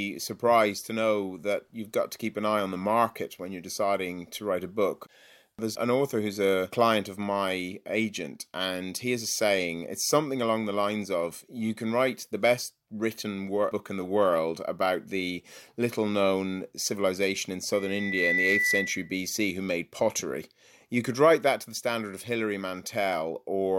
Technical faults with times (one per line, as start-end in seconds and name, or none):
17.73-19.20 loudspeaker feedback squeal